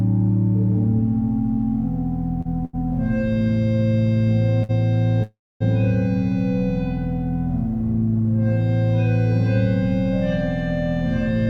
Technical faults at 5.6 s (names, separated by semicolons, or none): call audio freeze